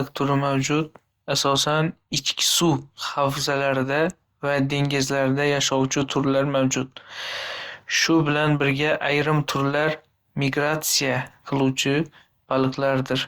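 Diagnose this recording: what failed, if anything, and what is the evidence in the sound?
Codec stage: generation loss throughout the speech. It sounds swirly, hollow and smeared, with blurred consonant attacks, yet the band reaches 20.1 kHz, which fits Opus at around 64 kbit/s. The likely cause is about four successive encodes, each requantising on a shifted frame grid, compounding noise.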